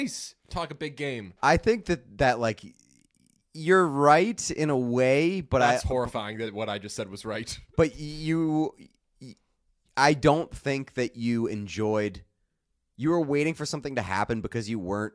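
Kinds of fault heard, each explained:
No faults can be heard.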